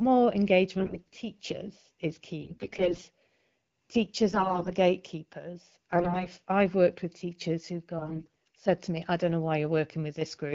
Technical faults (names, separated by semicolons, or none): AMR bit errors